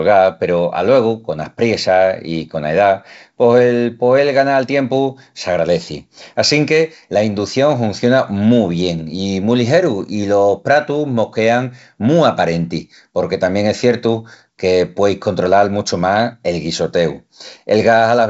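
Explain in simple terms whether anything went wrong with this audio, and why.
Nothing stood out as going wrong when listening to this speech, which comes across with the usual sound of a wideband phone call.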